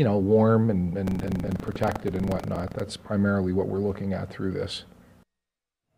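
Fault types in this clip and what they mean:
Buffer tearing, 1.04 to 2.83 s: the ring buffer's writer and reader cross every period, splicing in a sliver of older audio and causing a 25 Hz rattle.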